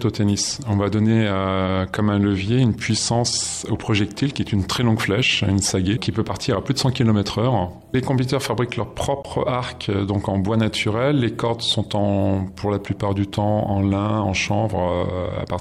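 At 9.23 to 9.25 s there is an AAC frame loss with muting: the decoder zeroed the missing spectrum, leaving a gap of about 21 ms, which fits a single lost frame. Overlapping windows fade it out and back in, so the hole is soft-edged, unlike a hard sample dropout.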